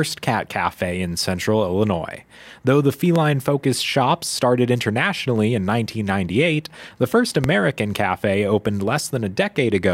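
A loud pop hits at 3.16 to 3.18 s and again at 7.44 to 7.47 s, about 15 dB above the speech. Each is likely a sudden electrical pulse.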